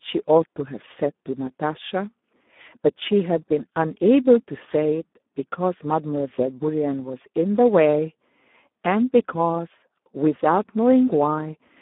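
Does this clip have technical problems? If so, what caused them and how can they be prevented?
Yes. Throughout, the speech runs through a Speex codec at a very low setting, consistent with about 8 kbps, leaving too few bits for the excitation. The voice sounds hoarse and noisy, squeezed into a narrow 200 Hz to 3.6 kHz line band with nothing above 3.8 kHz. Using a higher Speex quality setting, or a modern wideband codec such as Opus, would prevent it.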